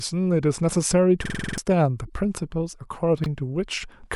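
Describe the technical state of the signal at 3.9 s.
At 3.9 s the speech signal is intact, with no dropout, clipping, glitch or other fault to be heard at that moment.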